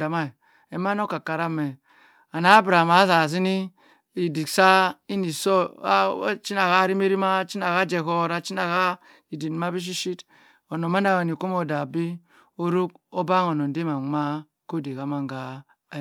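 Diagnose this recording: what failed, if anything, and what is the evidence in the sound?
Nothing failed in this recording, and the sound gives no evidence of a fault at any stage.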